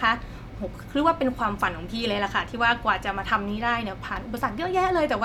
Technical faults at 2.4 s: none

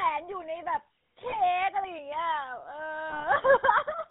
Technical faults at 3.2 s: GSM full-rate codec; lost GSM frames

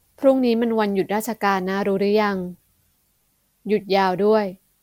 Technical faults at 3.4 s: generation loss

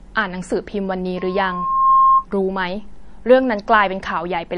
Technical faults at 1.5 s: MP3 compression; loudspeaker feedback squeal

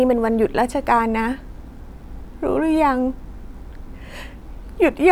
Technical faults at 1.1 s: none

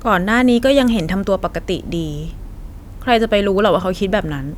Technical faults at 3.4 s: none

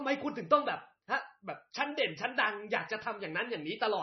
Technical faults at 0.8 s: MP3 compression

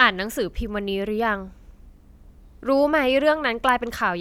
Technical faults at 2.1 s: none

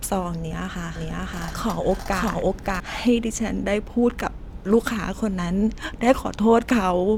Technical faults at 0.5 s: overlap between stream segments

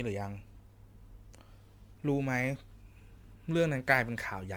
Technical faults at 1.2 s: generation loss; sample clock jitter

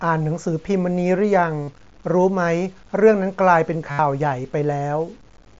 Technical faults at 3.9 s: low bit depth without dither; concealed Bluetooth headset packet loss

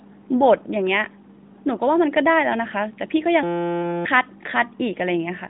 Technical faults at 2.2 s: none

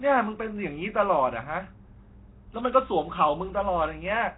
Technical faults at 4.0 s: Nellymoser compression

